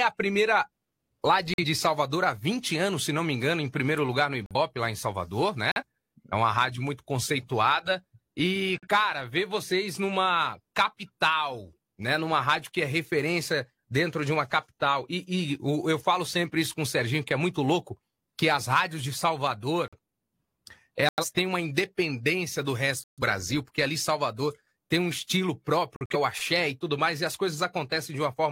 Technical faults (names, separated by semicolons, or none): corrupt frame muted